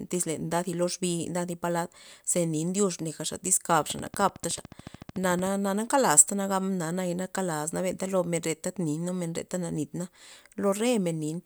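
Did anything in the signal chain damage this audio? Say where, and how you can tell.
Yes: a train of clicks from 3.91 to 5.48 s, about twenty regular pulses at 13.5 per second, likely interference on the analogue wiring, appearing as evenly spaced vertical spectrogram lines.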